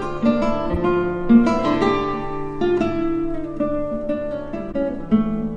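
At 0.73 to 0.77 s, and again at 4.71 to 4.75 s, a corrupt frame was decoded: damaged bits in a single compressed frame were read as wrong gains and codes, so the decoder put energy at frequencies that don't belong. Each lasts one frame and sounds like a brief glitch, the first fairly loud and the second noticeably quieter. Unlike a dropout or concealed loss, the fault adds energy at the wrong frequencies.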